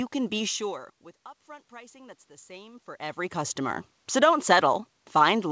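From 1.47 to 3.91 s, automatic gain rising is heard. The speech level at the microphone drops sharply, by about 22 dB. The gain control treats this as too quiet an input. It lifts its gain slowly, by about 4 dB over nearly two and a half seconds. The voice and the room noise swell up together. The rise is gradual, not a jump. The band stops at 8 kHz, as the call codec passes nothing higher.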